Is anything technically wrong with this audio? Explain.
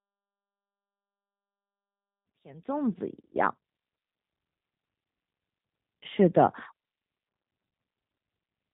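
Yes. The speech carries G.729 codec damage from start to finish. The codec rebuilds each 10 ms frame from a vocal tract filter, a pitch predictor and a few pulses, which fits an 8 kbit/s VoIP link. Nothing above 4 kHz survives. The voice sounds plainly rough and synthetic. The smooth fade-in, from around 2 s to 3.69 s, is a clean editing choice, not a fault.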